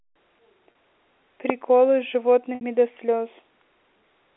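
At 0.72 s and again at 2.55 s there's packet loss with pitch repetition. The receiver loops the last pitch period to cover gaps of 30 ms and then 60 ms, which fits one and then two lost packets, so the first spot sounds briefly held and buzzy, while the second fades into silence before the speech cross-fades back, all through the narrow G.711 phone band.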